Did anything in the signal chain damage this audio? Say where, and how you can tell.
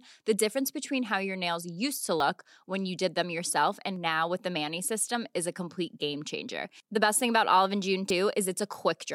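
Yes. Brief skips cut in at 2.20 s (between "your nails used to" and "when you did them"), 5.15 s (before "is a complete game") and 8.10 s, each dropping about a twentieth of a second. This is audio missing between chunks, likely lost at the buffer stage during each 3-second chunk handover.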